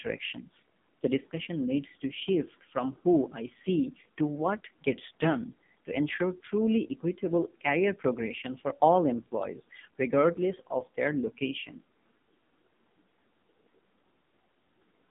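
From start to finish you're hearing the AMR narrowband mobile codec, and it's working hard. Nothing gets above 3.7 kHz, the line sits roughly between 150 Hz and 3.6 kHz, and the buzzy, synthetic texture fits a low rate around 5.9 kbps.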